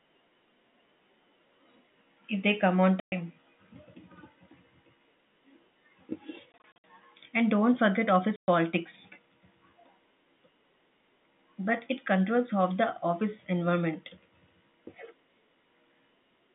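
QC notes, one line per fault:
3.0–3.12 s, 6.52–6.84 s and 8.36–8.48 s, packet loss filled with silence: lost packets became hard-edged gaps of 120 ms, scattered 160 ms and 120 ms, multiples that fit 20 ms packets in the telephone-band audio.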